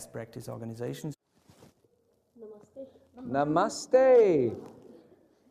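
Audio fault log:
Nothing faulty can be heard anywhere in this clip. There is no event to log against it.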